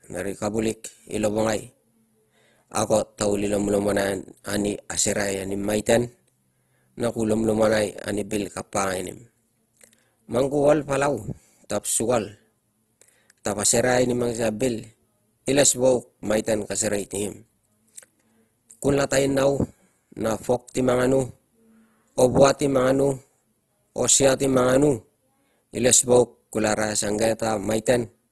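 From start to finish the speech sounds rough and grainy, with harmonics smeared into a hissy, noise-filled texture and little of the swirling that holes in the spectrum would cause. This is likely Opus compression in its music mode, at a low bitrate that fits about 16 kbps, refilling starved bands with folded or noise content. A spectrogram shows a flat ceiling with nothing above 12.3 kHz, and the upper bands look speckled and noisy instead of finely striated.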